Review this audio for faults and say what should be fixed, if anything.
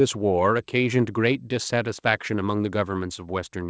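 Nothing needs fixing: the speech has passed through normal call microphone processing and a wideband call codec path, with its content ending at about 8 kHz, as that path produces.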